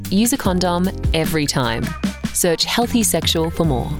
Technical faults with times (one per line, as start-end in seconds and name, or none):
0.10-3.98 word clock ticks